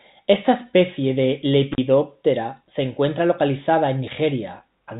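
Speech over a G.711 telephone path, band-limited to 4 kHz. At 1.72 s, just after "especie de", an intermittent contact opens for about 44 ms. The sound drops out with crackle at both edges, as a loose plug briefly breaks the line.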